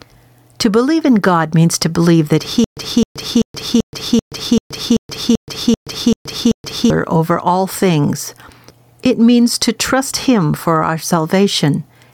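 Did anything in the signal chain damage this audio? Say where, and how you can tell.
Yes. Throughout the speech the level pumps, swinging by around 10 dB, and loud and quiet passages sit unnaturally close together. This is gain pumping, and it points to the call-processing or capture stage. The likely cause is input gain set far too high, with a fast limiter or compressor clamping down on every peak and releasing in the gaps.

From 2.64 s to 6.90 s, a single 261 ms fragment plays again and again, eleven times, each followed by 127 ms of dead digital silence, so the burst recurs every 387 ms at a steady rhythm. This stutter with silent gaps sits at the buffering or playback stage. The likely cause is a stalled stream: at each retry the player replayed its last fragment and then ran dry, and the audio meant for that stretch never arrived.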